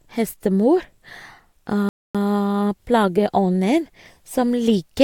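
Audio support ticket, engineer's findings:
Playback stall in speech, 1.89 to 2.15 s: output drops to silence for about 257 ms mid-flow, then carries on. Likely the player starving for data or its audio thread getting blocked, so nothing reached the output until it caught up.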